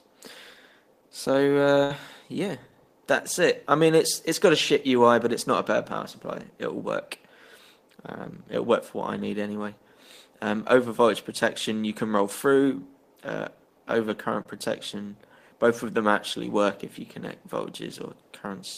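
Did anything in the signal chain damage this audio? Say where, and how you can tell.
Yes, in two places, and both point to the network stage. At 1.83 to 1.92 s there is a burst of packet loss. About 60 ms of audio never arrived. The receiver bridged the gap by extending the last sound for 64 ms, fading it as it went. You hear a held, decaying tail, then the sound jumps ahead. The missing stretch is simply gone. That pattern comes from lost packets, not from the recording itself.

At 14.43 to 14.47 s there is a short concealed packet loss. This time only about 20 ms failed to reach the decoder. The receiver synthesised 21 ms from the preceding sound and crossfaded back into the real signal. The result is a brief smear or wobble rather than a clear gap. It is far shorter than the first event, but it shows the same concealment at work.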